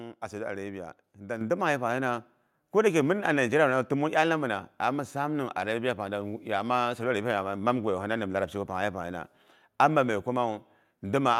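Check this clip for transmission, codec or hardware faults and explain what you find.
One fault is present: a microphone volume stepped up at 1.41 s. At that instant the speech and the background noise both rise by about 7 dB in a single step and stay at the higher level. This points to automatic input gain control in the call software, which judged the microphone too quiet and raised the device's input volume at once rather than gradually. Because the gain is applied before any processing, the room noise floor jumps along with the voice.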